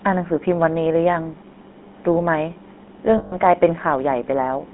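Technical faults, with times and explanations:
Throughout: GSM full-rate codec. Buzzy, gravelly roughness consistent with a 13 kbps full-rate coder. The spectrogram shows energy confined to 200 Hz–3.5 kHz with coarse, smeared harmonics.
3.18–3.34 s: lost GSM frames. About 140 ms, consistent with seven lost 20 ms frames, is filled by a repeated earlier frame. It sounds like a metallic ring, with frozen horizontal streaks on the spectrogram and a repetitive waveform.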